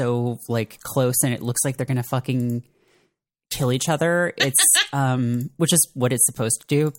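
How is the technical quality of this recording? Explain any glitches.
Nothing in the recording stood out as a technical problem on listening.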